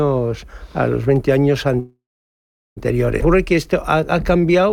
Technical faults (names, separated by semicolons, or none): call audio freeze; skip ahead; jitter buffer slow-down